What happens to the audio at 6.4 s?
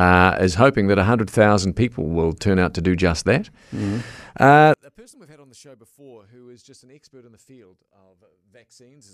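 At 6.4 s the speech has dropped to a faint residue about 33 dB down, a state that lasts from 4.74 s to the end. The likely cause is one channel inverted: with one side's polarity reversed, the shared centre content cancels when summed to mono.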